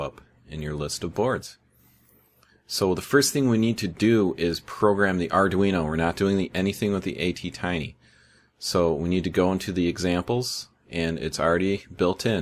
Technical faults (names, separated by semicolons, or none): none